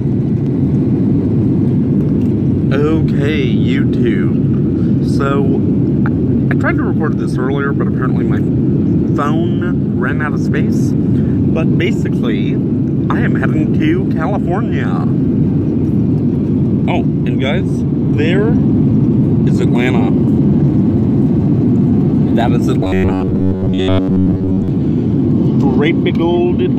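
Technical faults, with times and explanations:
22.84 to 24.68 s, robotic sound from repeated short buffers: the sound turns into a rigid, metallic buzz at 93.8 Hz, likely because new audio arrived too seldom and a chunk of about 10.7 ms got looped over most of that stretch, skipping the real material.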